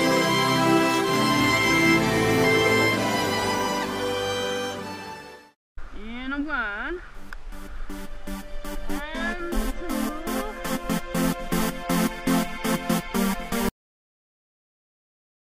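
There's a cut-off end on this one: at 13.69 s the audio just stops mid-sound and drops straight to digital silence, with no decay or tail at all, and it stays dead for the last 1.7 s or so. That abrupt edge points to the final buffers never being written out, so whatever was still sounding got chopped rather than finishing, and the file just runs on empty after that.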